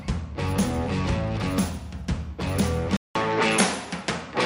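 At 2.97 s the sound drops out for about 0.19 s, then returns duller and boxier through to the end of the clip. Nothing is left above 11.4 kHz, the level shifts by roughly 5 dB, and a new, faint background noise sits well below the signal. The likely cause is the input switched to a poorer device mid-recording, a different microphone or headset path with its own narrower band, tone, level and noise floor.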